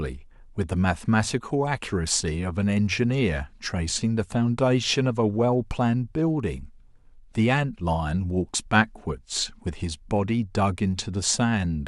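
No technical faults are audible.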